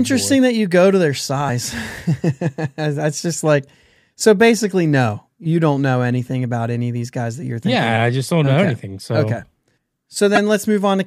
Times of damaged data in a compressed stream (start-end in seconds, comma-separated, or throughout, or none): 10.35-10.38